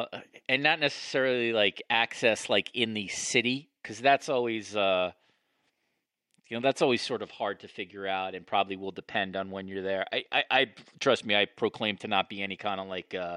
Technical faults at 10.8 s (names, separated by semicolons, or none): none